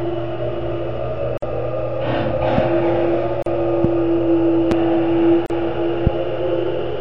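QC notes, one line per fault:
1.38, 3.42 and 5.46 s, gap at a join of encoded pieces: silences of 48, 38 and 38 ms every 2.0 s, where separately encoded segments were joined with encoder delay and padding untrimmed.
2.58, 3.84, 4.71 and 6.07 s, loud pop: single sharp pops about 15 dB above the sound, which continues underneath, likely from a voltage spike such as a plug, switch or static.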